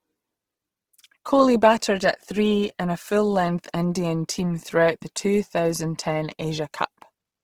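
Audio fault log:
throughout: Opus compression, likely the cause of the plainly audible damage across the whole clip. Speech keeps its full bandwidth, but tonal parts turn rough, grainy and noisy, as if bands were filled with folded copies or noise rather than left empty. That texture points to Opus in its music mode at a low rate, consistent with about 16 kbps. Unlike MP3, there is little swirling or hollow warbling, and it isn't the muffled, narrowed sound of a speech-mode encoder.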